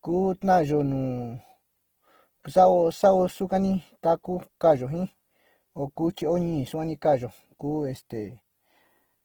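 Throughout the speech, the sound is rough and grainy, with a noisy, smeared texture on voiced parts, while content still extends to about 20.1 kHz. This is likely Opus compression in its fullband music mode, filling starved bands with folded or noise energy, consistent with roughly 16 kbps.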